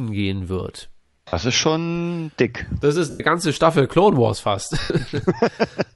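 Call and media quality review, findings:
Bluetooth LC3 compression, whole clip: likely LE Audio transform codec at a modest rate, roughly 48 kbps with 10 ms frames. Upper spectrum partly replaced by filled noise, giving the speech a plainly audible breathy, grainy edge.

Lost LE Audio frames at 1.28–1.34 s (50 ms, between "gehen wird" and "ist schon dick"), 3.10–3.20 s (100 ms) and 4.81–4.90 s (90 ms): radio link dropped frames, and the decoder concealed them by replaying the previous spectrum with scrambled phase. Speech smears into noisy hiss, fading toward silence in the longer gaps.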